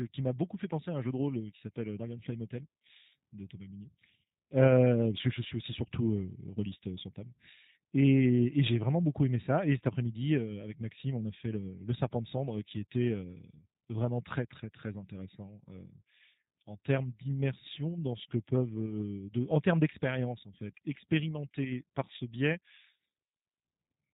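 From start to finish the speech has a slightly rough, synthetic, buzzy edge, and nothing is heard above about 4 kHz, leaving it narrow and telephone-like. The G.729 codec damage is plainly audible, pointing to the 8 kbit/s G.729A variant. The voice is rebuilt in 10 ms frames from a vocal tract filter, a pitch predictor and a few coded pulses per half-frame rather than the actual waveform, so fine detail turns coarse and artificial.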